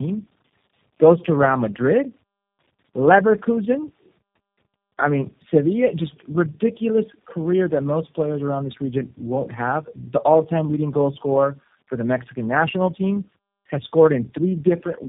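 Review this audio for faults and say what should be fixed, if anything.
Tandem speech coding throughout: the audio was repeatedly decoded and re-encoded, fitting three low-rate speech codecs in a row, leaving speech rough, warbly and muffled, with nothing above 3.7 kHz. To prevent it, pass the coded stream through unchanged, or transcode only once between networks.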